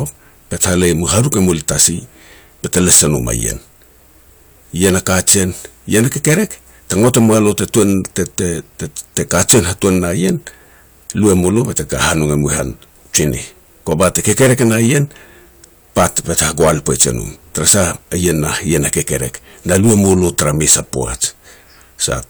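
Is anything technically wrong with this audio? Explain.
Yes. Hard clipping runs through the whole speech clip. The signal is driven about 20 dB past what the chain can pass, so roughly three percent of samples hit the ceiling and are sliced flat. Those flat tops add harsh high harmonics, heard as gritty fuzz on louder syllables. The waveform shows squared-off peaks, and the spectrogram shows energy smeared upward across the spectrum.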